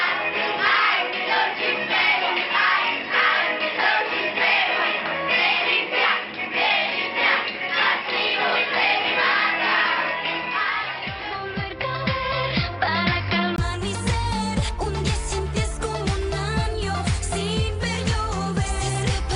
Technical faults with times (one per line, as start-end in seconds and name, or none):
0.00-13.58 input switched to a poorer device